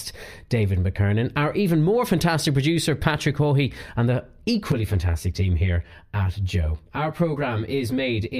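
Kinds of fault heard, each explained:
Channel delay (comb filtering): From about 4.72 s, just after "and the", to the end of the clip, the speech turns hollow and phasey. One channel arrives around 10 ms late. When the two channels are folded to mono, the shared sound cancels at evenly spaced frequencies. The lowest notch sits near 40 Hz, and the others repeat up the spectrum. These notches stay fixed, so the tone remains thin and coloured throughout that stretch.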